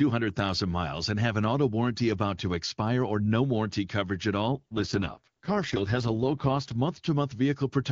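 Right after "no warranty coverage at", from 4.48 to 6.75 s, there's an AMR rate drop: the speech gets rough and raspy, consistent with a fall to AMR-WB's 6.6 kbit/s floor, with no gap or band change.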